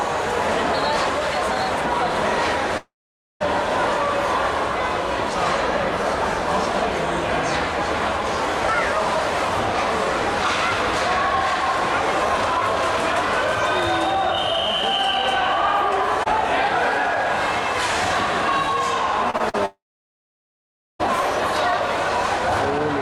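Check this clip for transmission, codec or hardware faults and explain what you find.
Two kinds of fault are present: network dropouts and concealed packet loss.

Long network dropout, 2.77 to 3.42 s: the last sound continues briefly as a fading buzz or hiss, then about 0.51 s of silence, likely from audio stopping arriving.

Short concealed packet loss at 19.30, 19.37 and 19.49 s: gaps of 20 to 40 ms are bridged by extrapolating the previous sound, heard as quick smears or wobbles.

Long network dropout, 19.66 to 21.01 s: the same fading fill, then about 1.2 s of silence before the sound resumes with that portion missing.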